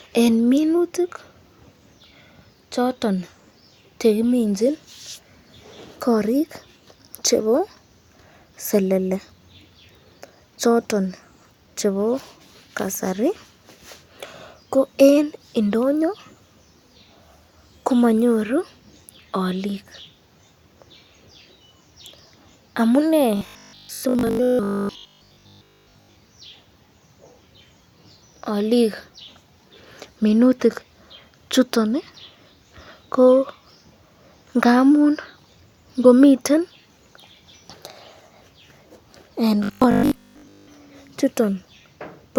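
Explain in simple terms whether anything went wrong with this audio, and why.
Robotic sound from repeated short buffers appears twice, from 23.37 to 26.15 s and again from 39.64 to 40.68 s. The speech turns into a stiff, metallic buzz pitched at 50 Hz but still roughly tracks the words. The likely cause is audio arriving too slowly, so the player kept replaying a tiny slice, about 20 ms long, in place of most of the real sound. Those rapid repeats create the buzz.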